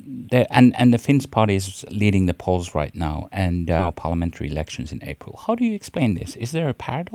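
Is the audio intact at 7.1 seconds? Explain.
Yes, the audio is intact at 7.1 seconds, with no audible fault at that moment.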